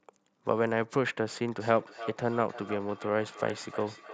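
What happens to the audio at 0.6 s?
Nothing goes wrong at 0.6 s; the speech carries on intact through that moment.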